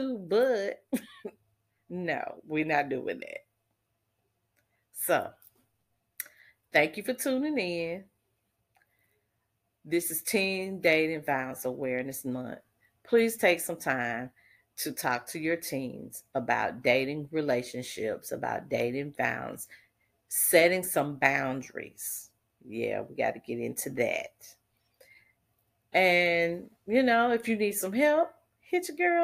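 Speech recording, no technical faults detected anywhere in the clip.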